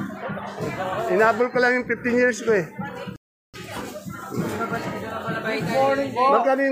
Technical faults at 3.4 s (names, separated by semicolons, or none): rebuffering stall